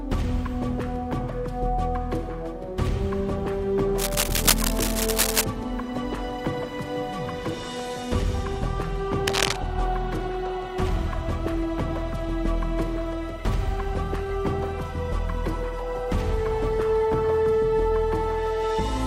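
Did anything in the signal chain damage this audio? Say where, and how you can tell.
Yes, in the analogue wiring: a likely worn connector shifting causes cable scratch noise, ragged scratching about level with the sound at 3.98–5.44 s and 9.27–9.56 s.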